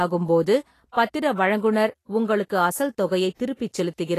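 Throughout the speech, nothing sounds above 14.2 kHz. The treble is hissy and grainy, consistent with a low bitrate near 33 kbps, likely from Vorbis compression.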